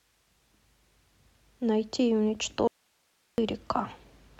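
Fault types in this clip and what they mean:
Audio dropout to a faint residue: from 2.68 to 3.38 s the speech cuts out abruptly, leaving only hiss around 45 dB below it, then returns mid-flow. The likely cause is a loss of signal upstream while the path after the break stayed live.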